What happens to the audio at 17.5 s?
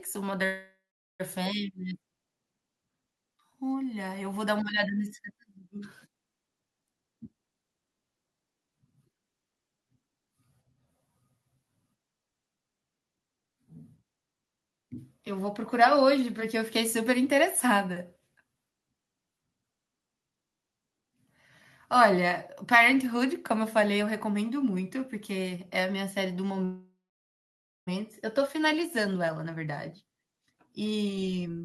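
Nothing goes wrong at 17.5 s; the speech plays through that moment intact, with no dropout, click, distortion or other fault.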